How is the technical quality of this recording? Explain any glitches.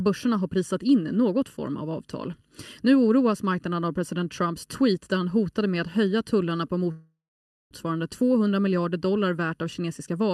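The recording has two clear faults: a hollow, phasey colouring that runs through the whole clip, and a brief freeze in the speech a little past the middle.

Channel delay (comb filtering), present throughout: one channel arrives less than a millisecond behind the other, and the two are summed to mono. Wherever the shared signal lines up half a cycle out of step it cancels, carving evenly spaced notches into the spectrum, the first around 700 Hz. The speech therefore sounds hollow and phasey, as if heard down a tube, with the notches fixed rather than sweeping.

Call audio freeze, 6.91 to 7.74 s, right after "att höja tullarna på": the audio stalls for about 0.8 s. This is likely caused by packets being held up in transit until the jitter buffer ran dry. The receiver filled the wait by extending the last sound into a fading buzz or hiss that drops to silence for about half a second. The speech then resumes exactly where it stopped, so a pause has been inserted but nothing is lost.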